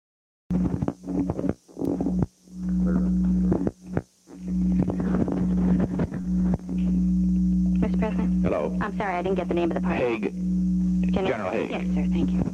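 The clip opens with a cut-off start. Digital silence runs until 0.51 s, where the sound begins abruptly mid-event because recording started late. There is no attack or fade-in, so the waveform jumps straight from a flat line into the signal, and the spectrogram shows a sharp vertical edge.

At 6.21 to 6.25 s there is a short concealed packet loss. About 20 ms of audio never reached the decoder, and the receiver extrapolated the preceding sound to fill roughly 21 ms before blending back. It is heard as a brief smear or wobble. The spectrogram shows a thin, slightly blurred vertical strip.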